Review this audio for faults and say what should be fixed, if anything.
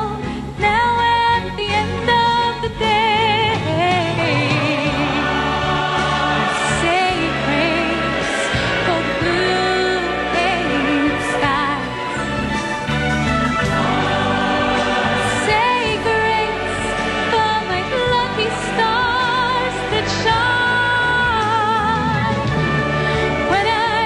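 Short glitches at 4.14–4.19, 9.15–9.21 and 22.76–22.81 s, each jumping the audio ahead about 150, 50 and 100 ms: compressed frames skipped, whole 46.4 ms frames missing. Re-encode from the source and verify file integrity so no frames are lost.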